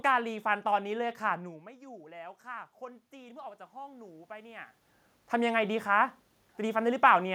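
Around 1.5 seconds the talker moves away from the mic and the level drops by about 19 dB. From 1.46 to 4.72 s you get automatic gain rising: the gain control sees a quiet input and slowly winds itself up by about 9 dB to compensate. Because it boosts everything it hears, the room noise swells right along with the voice, so the background creeps up over those three-odd seconds before the talker moves again around 4.5 s.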